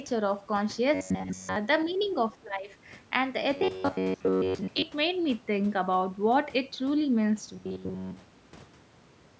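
A recording of speech carries three kinds of call fault. From 0.94 to 1.56 s, 3.57 to 4.82 s and 7.53 to 9.39 s the voice turns into a rigid, metallic buzz pitched at 93.8 Hz. It still loosely tracks the speech. In the first stretch the buzz covers the whole span, and in the later two it covers most of it. This is robotic sound from repeated short buffers, most likely caused by late audio being replaced with loops of the last fragment. A buzz at 93.8 Hz points to a repeat of roughly 10.7 ms, and the real audio underneath is skipped. At 1.25 to 1.31 s the voice dips slightly, and from 2.34 to 2.72 s it drops deeply. This is speech suppressed in double talk, probably because an echo canceller attenuated the talker while the far side was speaking at the same time. The second dip runs to about 400 ms and cuts much harder than the first. Between 2.03 and 2.07 s a very faint trace of a second voice slips in, far below the talker. 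This is the other side's voice leaking through, likely residual loudspeaker echo that the canceller failed to remove from the microphone. The band stops at 8 kHz, consistent with ordinary call microphone processing.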